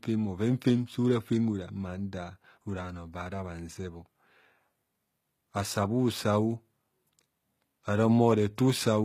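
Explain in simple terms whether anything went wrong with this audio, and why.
Something did go wrong, and it lasts the whole clip. The speech has the plainly audible damage of HE-AAC compression, likely from heavy squeezing. The coder keeps the lower part of the sound and invents the treble by copying lower bands upward, so the s sounds come out gritty, metallic or lispy, and nothing at all survives above 14.9 kHz. Unlike a simple muffled cut-off, the top still sounds bright, just artificial.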